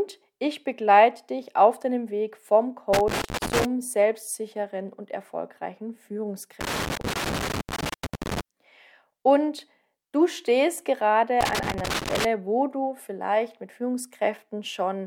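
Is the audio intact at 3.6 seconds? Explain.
No. At 3.6 seconds the audio is inside a burst of loose connector crackle that runs from about 2.93 to 3.65 s. A worn or dirty contact in the signal path is making and breaking intermittently, so the signal is repeatedly interrupted, and any DC present on the line turns each break into a pop. The result is an irregular scratching crackle over the sound for roughly 0.7 s, ending just after the requested moment.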